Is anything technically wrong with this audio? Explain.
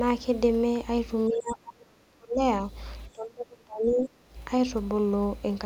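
Yes. From 1.29 to 2.39 s and again from 3.13 to 4.16 s the speech is sharply pushed down, by up to about 35 dB in the first stretch and about 30 dB in the second. This is speech suppressed in double talk, likely because the echo canceller took the talker for loudspeaker echo and attenuated both. Unlike a network dropout's clean silences, the speech dips for about a second each time.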